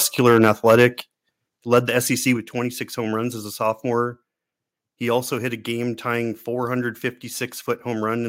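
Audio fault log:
0.26 to 0.86 s and 1.73 to 1.79 s, microphone overload: the loudest peaks are squared off, about 6 dB over in the first stretch and about 3 dB in the second, giving a harsh crackle, likely from excessive input gain. The waveform shows flattened tops on a few percent of samples, and the spectrogram shows broadband vertical smearing at those peaks.
1.02 s and 2.37 s, microphone volume stepped down: the level drops abruptly, by about 6 dB and then about 5 dB, each shortly after a distorted peak, likely the call software cutting input gain to stop clipping. The waveform envelope shrinks in one step, and the spectrogram dims evenly across all frequencies.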